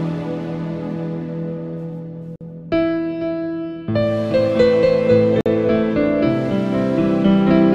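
At 2.36 s and 5.41 s there's a gap between chunks: 50 ms silences between 3 s chunks, leaving clean holes.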